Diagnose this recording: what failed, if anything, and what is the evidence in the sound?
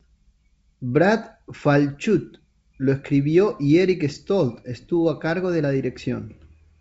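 Nothing failed; no faults heard.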